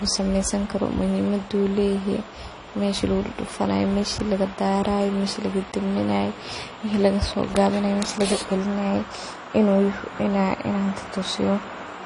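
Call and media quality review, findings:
Throughout: dull, band-limited speech, nothing above 11.1 kHz, two kinds of coding smear layered. Likely transcoding between lossy codecs: fits MP3 near 46 kbit/s re-encoded to AAC-LC near 32 kbit/s; AAC wastes bits on MP3 artefacts, adds more.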